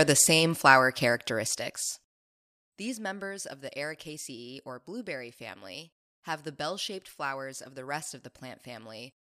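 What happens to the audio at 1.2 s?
Zipper noise runs from 1.10 to 2.62 s, right after "the same flower": the level drops about 15 dB in unsmoothed steps, around 150 a second, producing a fine ticking buzz.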